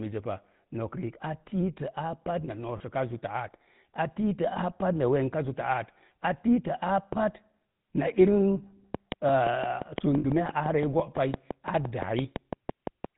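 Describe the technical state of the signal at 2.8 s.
At 2.8 s you're catching a lost GSM frame, running from about 2.78 to 2.81 s. Roughly 20 ms of the signal, which sounds like a single dropped frame, was patched by reusing the parameters from the last good frame. The gap is too brief to fade out fully, so what you hear is a quick rough, metallic ring where the sound briefly smears instead of moving on naturally.

That moment also sits on top of the GSM full-rate codec damage that runs through the whole clip, and it's plainly audible here. The codec models the vocal tract and drives it with a sparse, regularly spaced pulse excitation, which fits the old 13 kbps full-rate scheme. With nothing passing above 4 kHz, the speech comes across band-limited, with that characteristic buzzy, gravelly edge.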